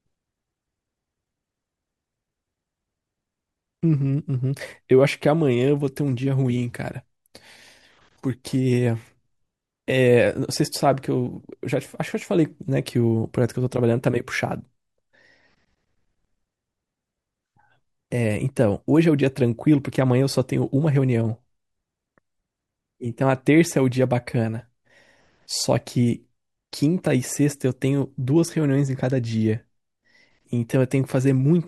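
No technical faults can be heard anywhere in the speech recording, and the signal stays steady and intact throughout.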